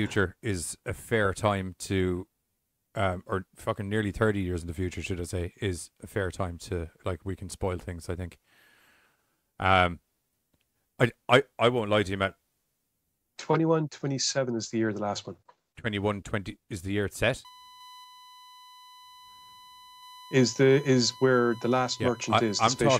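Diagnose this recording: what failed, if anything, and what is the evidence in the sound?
USB whine from 17.45 s to 22.82 s, in the analogue wiring and power stage: a steady 1 kHz tone appears under the speech and holds its pitch until near the end, sitting roughly 25 dB below the speech. The 1 kHz pitch matches the USB bus's 1 ms frame rate. Current drawn in those frames leaks into the audio path through shared power or ground, so the bus timing is heard directly as a fixed-pitch whine.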